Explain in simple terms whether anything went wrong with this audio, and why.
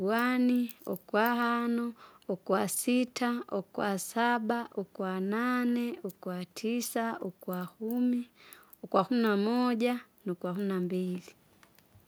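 Nothing went wrong here: no audible technical fault anywhere in this speech recording.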